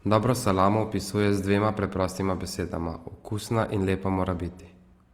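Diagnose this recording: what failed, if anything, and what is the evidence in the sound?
Codec stage: the speech carries plainly audible Opus compression damage from start to finish. Consonants and vowels sound rough and grainy rather than swirly, and the bandwidth stays fullband, so there is no muffling. The likely mechanism is Opus in music (CELT) mode starved of bits, which fits a rate around 24 kbps: band energies survive, but their fine structure is filled with folded or noise content. A spectrogram shows few holes but smeared, noisy texture in place of clean harmonics.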